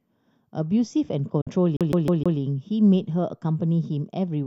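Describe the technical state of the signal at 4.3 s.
At 4.3 s the speech signal is intact, with no audible fault at that moment.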